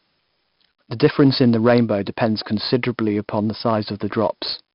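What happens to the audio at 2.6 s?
At 2.6 s the speech carries 4-bit ADPCM compression, as it does for the whole clip. Each sample is coded as a coarse 4-bit step from a prediction, leaving a gritty hiss that rises with loud syllables. Nothing is heard above about 5.3 kHz, and the dull, heavily damaged sound fits a rate of roughly 44 kbps.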